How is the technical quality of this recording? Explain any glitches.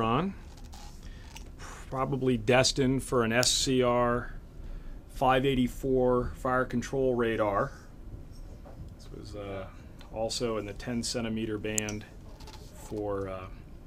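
Two sharp snaps break the recording, at 3.43 s and 11.78 s. Each is an electrical switching spike, peaking around -5 dBFS. A nearby switch or motor likely arced briefly, and the audio line picked it up as a click on top of the sound.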